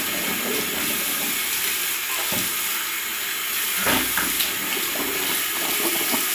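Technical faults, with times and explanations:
No technical faults can be heard anywhere in this recording of sounds.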